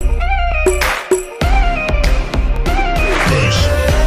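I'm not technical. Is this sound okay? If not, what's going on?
No, there's a fault called overlapping chunks: about 23 ms repeats at each one-second join, at 0.52, 1.54, 2.56 and 3.59 s, causing stutters.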